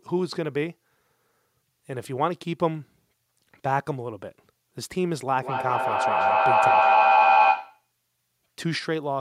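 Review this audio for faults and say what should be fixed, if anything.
Feedback echo between two devices runs from 5.42 to 7.91 s: the speech returns at a steady interval of about a fifth of a second, and the repeats grow to about 7 dB above the speech, showing a loop strong enough to build rather than fade. It happens because a second device in the room replays the call into the microphone, and neither echo canceller removes sound it did not play itself. To prevent it, join the call from only one device per room, or mute the other device's microphone and speaker.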